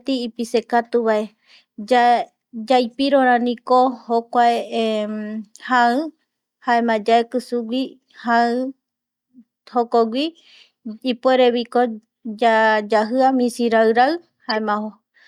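Right near the end of the speech, from 14.49 to 14.58 s, there's a corrupt frame decoded: a few damaged compressed frames got played anyway, so misread gains and codes throw energy into the wrong frequencies. It comes out as a fairly loud, roughly 80 ms glitch.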